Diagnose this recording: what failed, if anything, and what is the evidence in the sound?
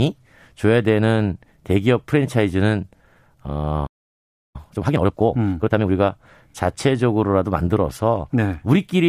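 A playback stall silences the speech from 3.86 to 4.56 s, about 0.68 s. It cuts off mid-flow, likely because the player's buffer ran dry.

Time-compressed catch-up follows from 4.56 to 5.90 s. The speech runs about 1.5 times fast at unchanged pitch, unlike a resampling speed-up, which would raise pitch.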